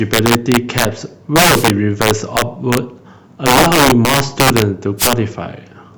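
Integer overflow runs through the whole speech clip: driven about 17 dB too hot, roughly 3 percent of samples wrap to the opposite sign, giving violent cracks, seen as sudden vertical jumps in the waveform. From 4.98 to 5.11 s, a wireless microphone noise hit: the radio signal fades, receiver noise swells into a static swish, shown as a broadband grey smear across the spectrogram.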